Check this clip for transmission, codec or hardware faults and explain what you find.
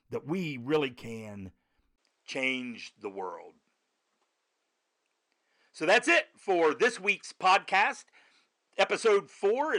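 One fault is present, starting at 1.96 s just after "that we really can" and lasting to the end. There the input likely switched to a poorer device. A 20 ms gap is followed by duller sound with nothing above 9.9 kHz and a faint new noise floor at an unchanged level. Unlike a codec bandwidth drop, the new background noise marks a different microphone.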